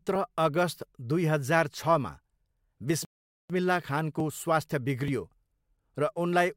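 A speech recording with one rebuffering stall: at 3.05 s the sound drops to silence and picks up again at 3.50 s, right where it stopped. The player ran dry of downloaded audio and waited, adding about 0.45 s without losing anything.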